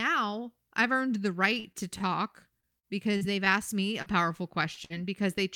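Speech that has come through a lossy packet link shows two stretches of repeated packet loss with a robotic sound, from 1.55 to 2.03 s and from 2.60 to 3.49 s. The first has four holes and the second five, the longest about 40 ms. The receiver patches every hole by carrying the previous sound forward, so about 88 ms and 136 ms of material is synthetic and roughly 40 ms and 80 ms of real speech is gone. The result is choppy. On a spectrogram these spans show repeated short blocks of frozen, smeared harmonics with seams where real audio resumes. A single short concealed packet loss follows at 4.02 to 4.09 s. About 40 ms never arrived and was replaced by 39 ms of continuation blended back into the real signal. It is heard as a brief smear or wobble. A waveform shows a small patch of overly regular cycles or flattened noise. At 4.74 to 4.80 s there is a short stall from a late packet. The jitter buffer ran dry and the last sound was stretched by about 24 ms until the packet arrived, matching a 24 ms jump in delay. 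Nothing is missing, but one sound is held slightly too long with a faint buzz, visible as a short horizontal extension of the preceding spectral pattern. Right after, at 4.85 to 4.93 s, a burst of packet loss removes about 40 ms of audio. The 50 ms of concealment decays as it goes, heard as a fading held buzz or hiss, and shows on a waveform as a shrinking envelope before the signal resumes further on.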